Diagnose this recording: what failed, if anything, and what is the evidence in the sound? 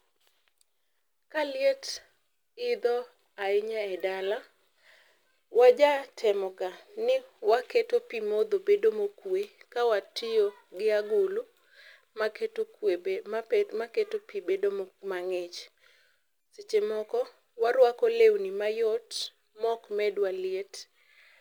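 Converter: sample clock jitter throughout the speech. A roughness, roughly 35 dB down, rides on loud, bright passages, since timing errors of a few microseconds scale with waveform slope.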